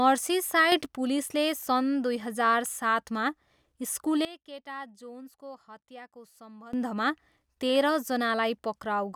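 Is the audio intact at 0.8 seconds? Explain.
No, not quite. Between 0.72 and 0.86 s there's a sudden gain jump of about 6 dB, right before "पुलिसले सन् दुई". The level steps up in a single sample instead of easing in, so the speech and the background noise jump together. That abrupt step is likely a gain setting or bit shift applied with no ramp.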